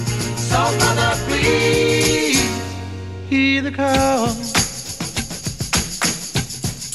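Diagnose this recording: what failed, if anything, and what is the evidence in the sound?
Nothing in this recording points to a failure at any stage between capture and playback. No dropout, glitch or distortion can be heard that would implicate the wiring, converter, buffering, processing, transmission or storage.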